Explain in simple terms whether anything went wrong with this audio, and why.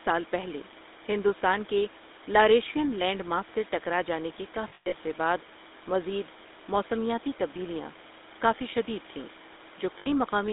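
Two things went wrong. First, the whole recording went through the GSM full-rate codec, the old mobile phone voice coder. It rebuilds the voice from a rough model and a string of regular pulses. That leaves a buzzy, gravelly roughness you can plainly hear all the way through. It also cuts the top and bottom off the sound. Nothing above about 3.7 kHz survives, so everything sounds thin and boxy, like an old phone call.

Second, there are lost GSM frames, small chunks of the signal that never arrived. The decoder filled each gap by repeating the last good chunk. That turns the voice into a brief metallic ring. The first spot runs from about 4.68 to 4.95 s. Here the gaps are scattered, and the longest lasts about a tenth of a second. The second spot, from 9.98 to 10.08 s, is a short loss of 80 ms.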